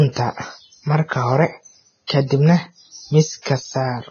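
The whole recording has heavy Vorbis compression, likely the cause of the hissy, grainy treble and roughened speech. Nothing gets through above 6.5 kHz, and the fine high detail has been flattened into noise, which points to a starved bitrate somewhere around 17 kbps.

From 2.07 to 2.10 s there's pre-echo, a 25 ms smear of hiss just before "ka dibna". The attack landed late in a transform block, so noise sized for the loud onset spilled into the quiet gap ahead of it, softening the start.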